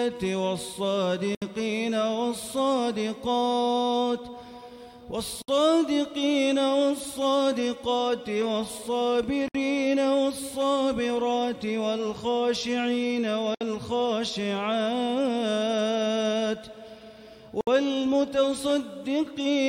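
Gaps at a join of encoded pieces open at 1.35, 5.42, 9.48, 13.55 and 17.61 s, recurring every 4.0 s. Each is a gap of about 70 ms at first, then 64 ms, with smeared edges. Separately encoded chunks were joined untrimmed, leaving encoder start delay and final-frame padding in place, and the sound resumes exactly where it broke off.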